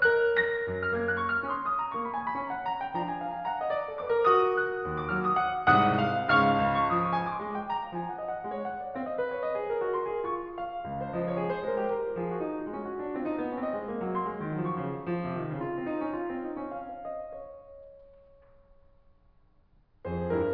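Nothing in this music stood out as a technical fault on listening.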